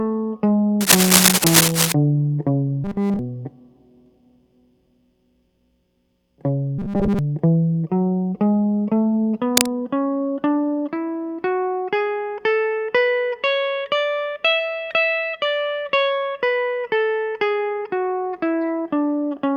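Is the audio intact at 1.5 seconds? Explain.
No, not quite. From about 0.80 to 1.92 s the music carries cable scratch noise: a dense, uneven rustle sitting a little above the music, roughly 5 dB over it. Most likely a worn cable or connector shifting, its contact resistance jumping around rapidly.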